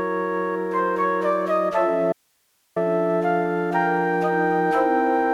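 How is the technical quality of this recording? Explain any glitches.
The recording has one clear glitch, an audio dropout to a faint residue. From 2.13 to 2.76 s, about 0.64 s, the sound cuts out abruptly and only hiss remains, roughly 45 dB below the signal. The likely cause is a brief loss of the wanted signal while the downstream path stayed live, so the gap carries noise rather than silence.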